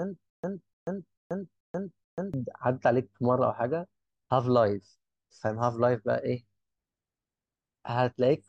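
From the very start until 2.34 s, a burst of about 0.30 s of speech repeats five times, each followed by about 0.14 s of dead silence, every 0.44 s. This stutter with silent gaps likely comes from a stalled stream replaying its last fragment at each retry, losing the audio meant for that stretch.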